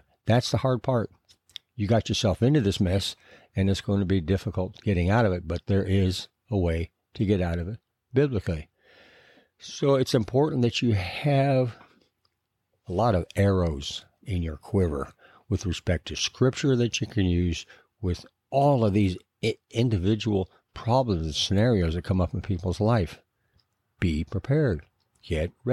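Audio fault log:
16.19 s, block of digital silence: about 5.3 ms of samples were dropped to silence between "quiver with respect to" and "scripture that you can". The waveform jumps to silence and back with no fade, so the two hard edges merge into one brief tick or dip.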